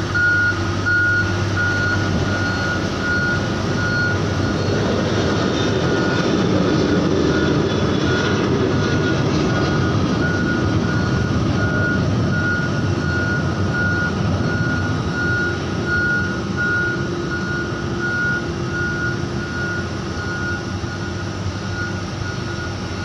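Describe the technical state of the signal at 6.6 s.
Nothing at 6.6 s points to a fault; the signal is intact at that moment.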